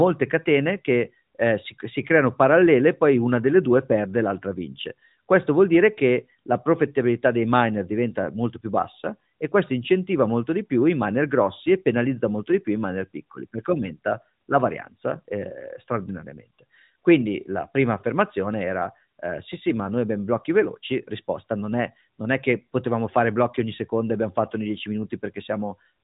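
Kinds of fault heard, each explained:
No faults found in the speech recording.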